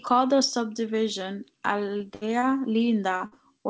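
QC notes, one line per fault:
1.97–2.03 s, 2.39–2.45 s, 3.17–3.23 s, short concealed packet loss: each time about 30 ms of speech failed to reach the G.722 decoder in time. The receiver bridged the hole by extending the preceding sound, then blended back into real audio, leaving a brief smear or wobble in the speech.
2.15–2.24 s and 3.26–3.35 s, burst of packet loss: each time about 60 ms of consecutive speech was lost. The receiver stretched the last sound across the gap while turning it down, so a held buzz or fading hiss stands in before speech resumes further on with that stretch missing.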